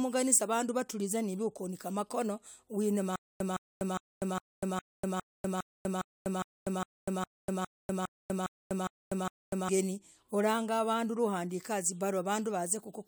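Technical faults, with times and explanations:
3.16 to 9.69 s, stutter with silent gaps: A 163 ms speech fragment repeats 16 times, each followed by 245 ms of digital silence, in a steady 408 ms cycle. The stream likely stalled, replaying its last fragment at each retry. The speech due then is lost.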